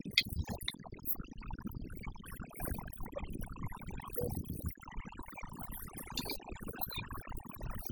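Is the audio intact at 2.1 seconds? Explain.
No. Overdone noise removal runs through the whole clip, 2.1 seconds included: bands near the noise estimate are gated hard, taking quiet speech detail with them. The background drops and breaks up into twinkling specks; a spectrogram shows scattered isolated blips and ragged, gappy harmonics.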